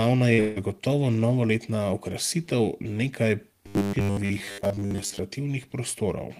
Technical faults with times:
0.33-0.40 burst of packet loss
0.40-0.58 long network dropout
3.67-5.19 robotic sound from repeated short buffers

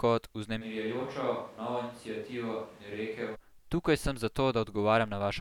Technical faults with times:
0.63-3.34 switch to a distant microphone

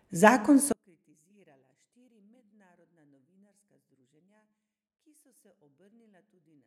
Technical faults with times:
0.72-6.67 one channel inverted

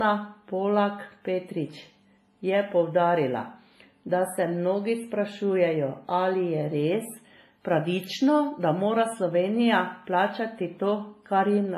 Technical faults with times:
0.00-11.78 WMA compression

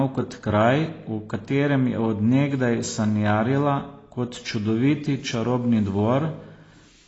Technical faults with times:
0.00-7.08 AAC compression

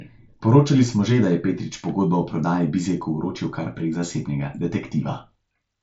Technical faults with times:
none

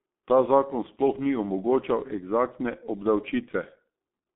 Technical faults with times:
0.00-4.35 G.723.1 codec

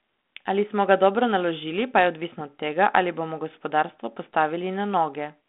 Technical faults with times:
none

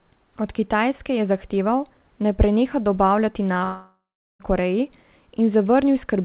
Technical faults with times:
3.54-3.62 short concealed packet loss
3.64-4.41 long network dropout

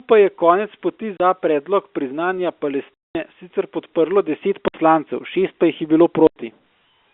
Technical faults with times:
1.17-1.20 packet loss filled with silence
2.94-3.15 packet loss filled with silence
4.68-4.74 packet loss filled with silence
6.27-6.36 packet loss filled with silence

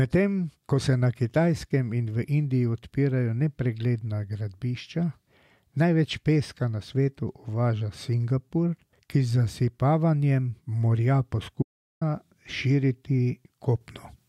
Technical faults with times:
11.63-12.01 audio dropout to silence

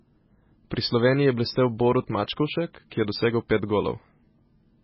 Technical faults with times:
0.00-4.84 MP3 compression

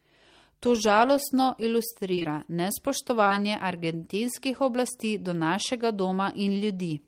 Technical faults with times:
2.15-2.26 short concealed packet loss
3.24-3.32 short concealed packet loss

